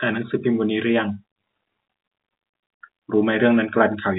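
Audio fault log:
No faults heard in this telephone-band speech.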